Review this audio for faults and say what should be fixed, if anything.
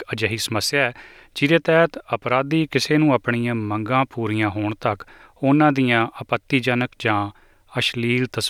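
Nothing stands out here that needs fixing, so there's no repair to make on this one.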